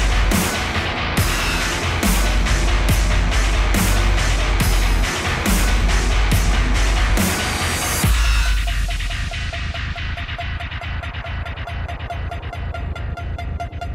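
No technical faults are audible.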